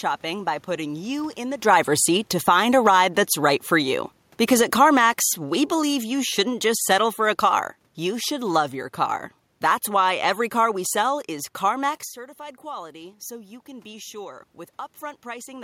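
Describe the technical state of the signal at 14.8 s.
At 14.8 s the signal is inside a stretch of automatic gain rising that runs from 12.13 s to 15.59 s. Just before it, around 12 seconds, the talker moves away and the input level drops by about 14 dB. The gain control compensates slowly, adding about 5 dB over several seconds, so voice and room noise swell together. The level is still climbing at this point and has not fully recovered.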